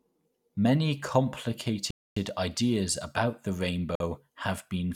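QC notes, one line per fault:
1.91–2.17 s, Bluetooth stall. The audio drops to silence for about 0.26 s, then resumes right before "ideas about the". The likely cause is interference delaying packets until the headphone buffer emptied, pausing playback until resent data arrived.
3.95–4.00 s, Bluetooth stall. A much shorter silent gap of about 0.05 s follows "ideas about the". It is heard as a brief hiccup. The same likely mechanism applies, with the buffer refilling almost immediately.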